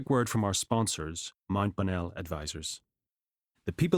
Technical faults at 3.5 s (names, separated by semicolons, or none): none